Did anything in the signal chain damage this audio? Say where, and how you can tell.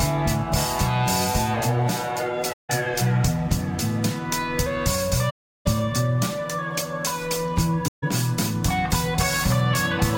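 Yes, at the codec stage: AAC frame loss with muting leaves soft-edged holes at 2.52–2.70 s, 5.29–5.67 s and 7.88–8.04 s. The decoder zeroed the missing frames' spectra, so overlapping windows fade out and in. A spectrogram shows blank full-band columns, and the waveform shows tapered gaps.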